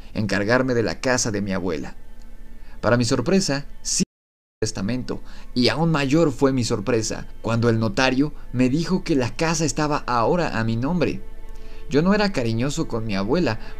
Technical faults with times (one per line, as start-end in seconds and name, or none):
4.03-4.62 audio dropout to silence